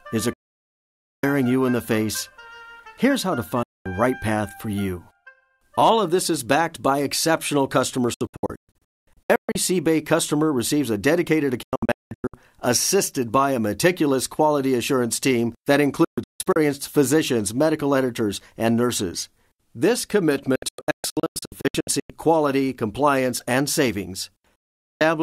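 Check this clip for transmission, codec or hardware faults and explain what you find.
Digital broadcast dropout recurs seven times: 0.33–1.24 s, 3.63–3.86 s, 8.14–9.56 s, 11.63–12.34 s, 16.04–16.56 s, 20.56–22.10 s and 24.56–25.01 s. The sound snaps to silence within about 3 ms, sometimes in one solid gap and sometimes, as at 8.14 s and 20.56 s, in scattered holes no longer than 224 ms. The receiver muted whenever frames were corrupted, and the hole lengths fit 32 ms frames. Whatever was transmitted during these gaps is gone.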